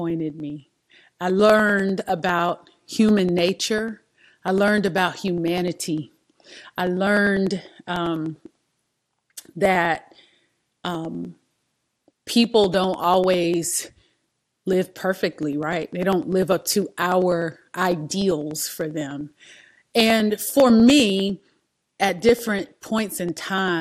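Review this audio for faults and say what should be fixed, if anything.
The speech sounds dull throughout, with plainly audible gurgling, granular distortion and upper frequencies that drop in and out. This is likely MP2 compression. MPEG Layer II divides the signal into 32 equal sub-bands and shares out a limited bit budget, so upper bands get switched off and the remaining ones are coarsely quantised. The degree of damage fits a bitrate around 80 kbps. To prevent it, encode at a substantially higher bitrate or keep a lossless copy.

Periodic USB or driver dropouts occur from 0.10 s to 23.68 s, one every 99.5 ms, around 200 in total. Each time, about half a millisecond of audio is skipped rather than replaced with silence, leaving a regular tick in the speech whenever there is signal. The even spacing points to a background task that blocks the USB bus or the audio driver on a fixed schedule. 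To prevent it, find and disable that task, or increase the driver buffer size during recording.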